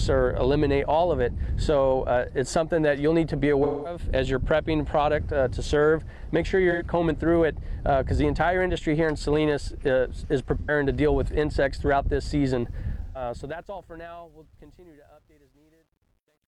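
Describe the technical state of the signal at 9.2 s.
At 9.2 s the signal is intact, with no dropout, distortion, click or other fault at that point.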